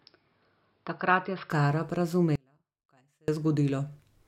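A speech clip. Until 1.5 s it sounds dull and slightly quieter, with nothing above 5.4 kHz and faint new noise. The input was likely switched to a poorer device. At 2.36 s the sound cuts out abruptly for 0.93 s, leaving only a faint trace far below normal level until 3.28 s. This is likely an audio dropout to a faint residue.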